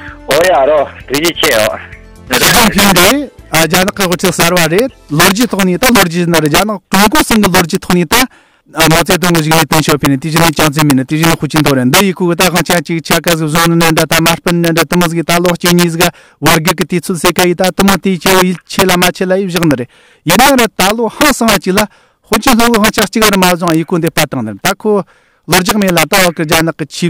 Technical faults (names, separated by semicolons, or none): integer overflow